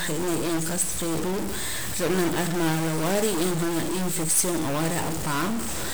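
From start to finish, the speech carries a harsh, buzzy distortion. The fault is a stuck bit, likely from a faulty data line or converter. About half the samples shift by a step of about -25 dBFS. Pauses fill with noise.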